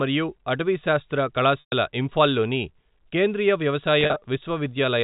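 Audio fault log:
1.60–1.72 s, packet loss with pitch repetition: about 120 ms of the stream went missing after "మరియు అటవీశాస్త్ర". The receiver repeated the last pitch period and faded it to silence, then cross-faded back in at "ఇంఫాల్ లోని కేంద్రీయ".
4.01–4.25 s, packet loss with pitch repetition: after "ఇంఫాల్ లోని కేంద్రీయ", 130 ms were lost in scattered gaps over 240 ms, the longest 40 ms. Each gap was bridged with a repeated pitch period, giving a held, buzzy stutter.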